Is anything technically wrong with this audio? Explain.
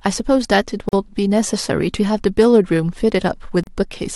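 Yes, there are two gaps at a join of encoded pieces in this speech. The first runs from about 0.89 to 0.93 s (about 42 ms), the second from 3.64 to 3.67 s (about 36 ms). It sounds like the audio was encoded in chunks and butted together untrimmed, so each join carries the encoder's leading silence and last-frame padding. You hear the speech drop out abruptly, smeared at the edges, then resume exactly where it stopped.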